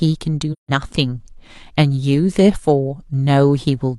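From 0.52 to 0.72 s the speech drops into a soft-edged silence. This is AAC frame loss with muting. The decoder zeroed the missing spectrum. Overlapping windows fade the sound out and back in. The 171 ms gap fits four lost frames.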